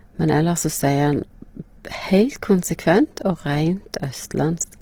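From start to finish the speech sounds rough and grainy, with noise standing in for fine detail and less swirling and fewer spectral holes than MP3. The cause is likely Opus compression in music mode at a rate that fits 16 kbps, with content still reaching 20.4 kHz.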